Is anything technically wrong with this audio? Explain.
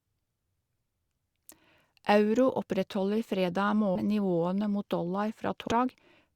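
Yes. The speech has compressed frames skipped twice, at 3.95 s and from 5.67 to 5.72 s. Whole blocks of the coded stream were lost or rejected by the decoder, so playback leaps forward. The first jump drops roughly 150 ms, and the second roughly 200 ms. Both fit 20 ms frames. The speech lurches ahead.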